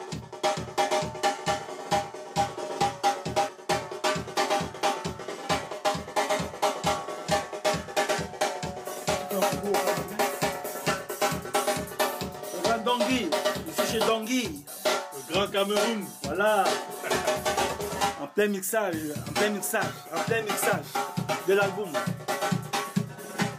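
There's a brief drop in the audio from 3.49 to 3.69 s, lasting about 0.21 s, where the level falls abruptly by about 6 dB and then comes straight back. That's the signature of one channel dropping out. One side of the stereo signal is likely lost for that moment, so in the mono sum whatever both channels shared loses half its contribution, and anything carried only on the missing side vanishes until the channel returns.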